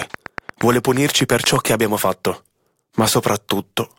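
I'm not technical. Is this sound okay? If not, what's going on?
No. From 0.02 to 1.57 s there is a train of clicks, about fifteen sharp ticks at a steady 8.5 per second over the speech, even in gaps. The likely cause is electrical interference or a faulty connection or power supply adding repeated pulses.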